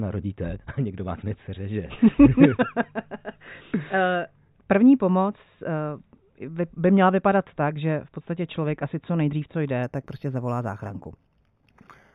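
A speech clip. From 9.83 s to the end, imaging from linear upsampling appears. The top is dulled, and a faint metallic shimmer rides on sibilants. A mirrored copy sits between 4 kHz and 8 kHz, roughly 35 dB down. This fits 8 kHz audio raised to 48 kHz by straight-line interpolation.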